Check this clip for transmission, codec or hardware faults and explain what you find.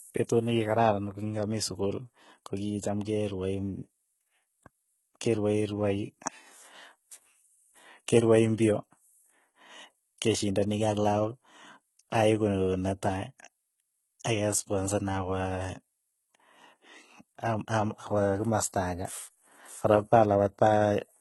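There's one codec fault across the whole clip. Throughout, the speech has gritty, metallic s sounds and nothing above 11.8 kHz, likely from heavy HE-AAC compression around 16 kbps rebuilding the treble from copied lower bands.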